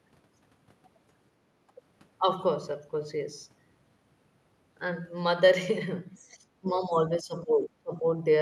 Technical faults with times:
1.55-1.76 background gated by the echo canceller
6.20-6.26 other side's voice leaking through
6.61-8.05 speech suppressed in double talk

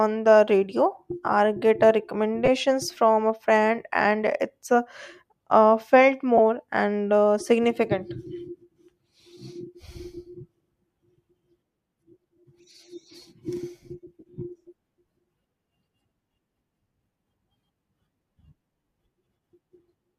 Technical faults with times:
2.46-2.48 lost LE Audio frames
6.37-6.39 lost LE Audio frames
14.20-14.23 lost LE Audio frames

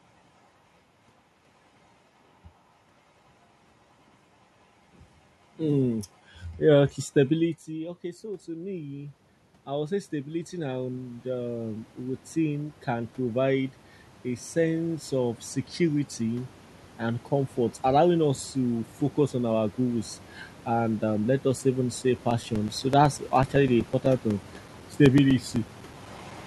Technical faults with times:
7.65-17.85 automatic gain rising
22.18-26.31 periodic USB or driver dropouts

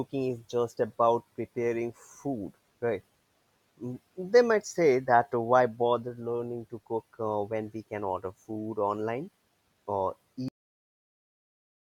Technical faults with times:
10.48-11.87 cut-off end

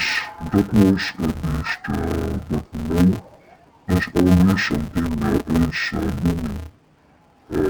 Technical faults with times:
0.00-7.70 interleaved audio read as planar

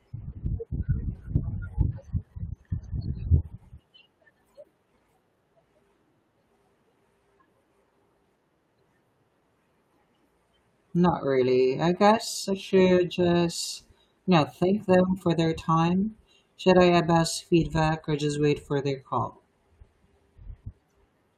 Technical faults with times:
3.79-3.81 skip ahead
3.89-5.98 jitter buffer speed-up

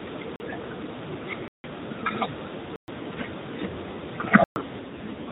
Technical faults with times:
0.36-0.40 block of digital silence
1.48-1.64 block of digital silence
2.76-2.88 block of digital silence
4.44-4.56 block of digital silence
4.80-5.31 AMR rate drop

